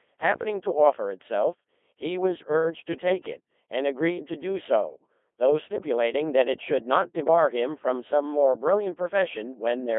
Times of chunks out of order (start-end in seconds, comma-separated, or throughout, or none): none